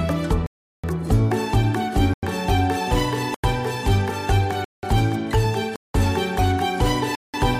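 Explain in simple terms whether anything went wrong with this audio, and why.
Six blocks of digital silence break up the audio. The sound drops to total nothing and snaps back with no fade. The longest hole runs from 0.46 to 0.84 s. Shorter ones sit at 2.14–2.23, 3.34–3.44, 4.64–4.83, 5.76–5.94 and 7.15–7.34 s. The gap lengths fit whole buffers of 4096 samples, so the program most likely didn't fill its output in time.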